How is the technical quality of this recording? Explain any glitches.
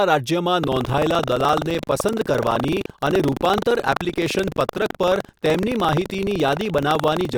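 Not great. There's one persistent fault, and it covers almost the whole speech clip.

From 0.6 s to the end there's buffer tearing. The writing program and the playback hardware have slipped, so roughly a tenth of each buffer holds audio about 100 ms old, with hard joins on both sides. Those joins repeat at 23.4 Hz, which fits a 2048-sample buffer, so you hear a steady robotic rattle over the speech.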